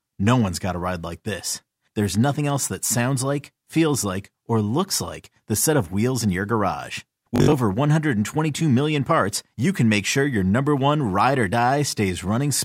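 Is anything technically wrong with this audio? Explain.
Yes. Just after "wheels in your garage", from 7.36 to 7.52 s, the speech breaks into a rapid machine-gun buzz. This is Bluetooth stutter: late or lost packets made the receiver replay short slices, dropping about 122 ms, the longest gap 61 ms.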